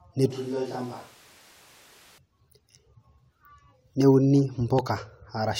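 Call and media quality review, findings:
Switch to a distant microphone, 0.31–2.18 s: roomy, hollow, thin bass, roughly 10 dB down, noisier. Likely close mic dropped, far mic took over.

Loud pop, 4.79–4.81 s: single sharp pop roughly 10 dB over the speech, which keeps going underneath. Likely a voltage spike from a plug, switch or static.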